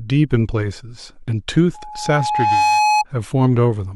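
From 1.74 to 3.04 s, a microphone-to-loudspeaker loop exceeds unity gain at 847 Hz, causing loudspeaker feedback squeal: a tone swelling over about a second until it rises above the speech.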